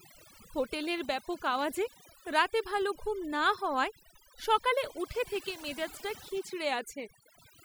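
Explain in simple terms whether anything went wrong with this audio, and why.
Overdone noise removal runs through the whole speech clip. A noise-cleaning tool was pushed too hard, cutting out any sound close to what it judged as noise, including quiet parts of the voice. The background drops and breaks up into twinkling specks.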